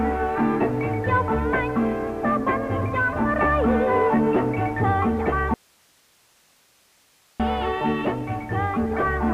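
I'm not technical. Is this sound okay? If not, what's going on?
No. Audio dropout to a faint residue, 5.54 to 7.40 s: the sound abruptly vanishes for 1.86 seconds, leaving only faint hiss, likely from a briefly lost signal.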